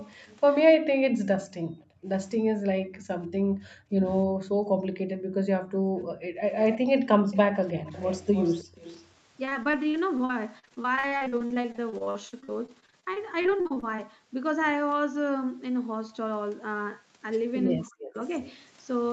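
From 0.0 to 0.55 s, a loudspeaker's sound was likely not fully removed by the far end's echo canceller, producing an echo leak: a faint copy of the voice, well below it, trails about 313 ms behind.

From 1.58 to 6.42 s, background gated by the echo canceller appears as the canceller clamps the microphone while the loudspeaker plays. For roughly three seconds in total, the room sound sinks by as much as about 40 dB and then returns.

The echo leak comes back from 6.59 to 6.78 s with a delay of 318 ms, somewhat louder. From 7.31 to 9.04 s it returns stronger still, trailing the voice by 320 ms. Inside that stretch the gating strikes twice more, briefly, at 7.74 to 7.85 s (about 40 dB down) and at 8.64 to 8.75 s (about 24 dB down), each a quick dip in the background.

From 9.45 to 14.00 s, repeated packet loss (robotic sound) sets in. Packets keep going missing or arriving late, and each hole is patched by stretching the last sound. 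The holes come in rapid succession, the longest lasting 45 ms, and about a quarter of the span is concealed. The result is choppy, with pieces missing.

From 17.88 to 18.23 s there is speech suppressed in double talk. Both sides likely talked at once, and the canceller turned the local voice down, so it drops deeply for a fraction of a second.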